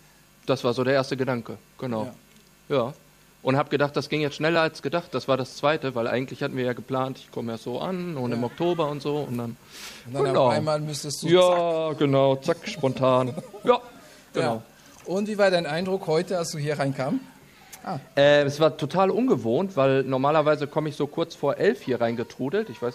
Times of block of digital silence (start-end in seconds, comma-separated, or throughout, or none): 4.56